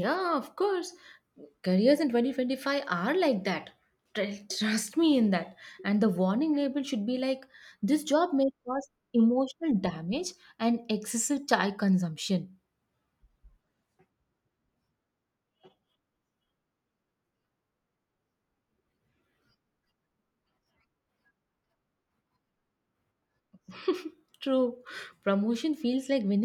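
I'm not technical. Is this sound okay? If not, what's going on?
Yes, no technical faults found in this recording.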